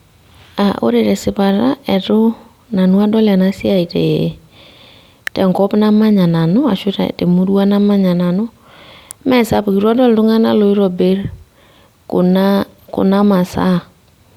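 At 5.27 s, just before "tenkop namanya nanu ashu", and again at 9.11 s, a sharp snap cuts over the speech, likely an electrical switching spike.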